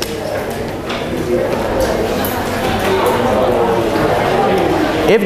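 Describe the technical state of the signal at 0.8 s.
At 0.8 s the audio is intact, with no audible fault at that point.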